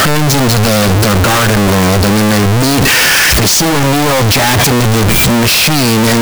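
Throughout, the 16-bit samples were likely read with signed and unsigned mixed up, flipping the top bit, so every zero crossing jumps full-scale into loud, harsh distortion.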